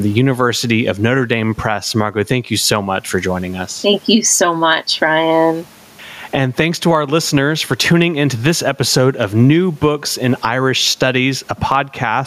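Gain pumping runs throughout the speech: the gain swings by roughly 15 dB, pulling down on every loud syllable and squashing the dynamics, with room noise about 42 dB below the speech. The likely cause is input gain set far too high, with a fast limiter clamping each peak.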